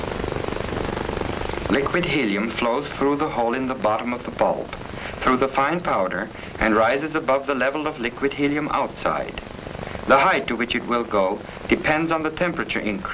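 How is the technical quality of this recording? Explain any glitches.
Nothing here sounds like a glitch to me; the recording runs along without any dropouts, clicks or other technical hiccups worth pointing out.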